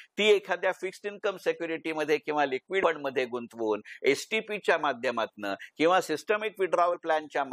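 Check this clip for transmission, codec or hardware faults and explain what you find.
Two dropouts of compressed frames skipped. At 2.82 s about 100 ms of audio vanishes, and from 6.93 to 6.95 s about 50 ms, which fits losing roughly five and two 23.2 ms codec frames. At each join the audio jumps ahead by the length of the missing frames.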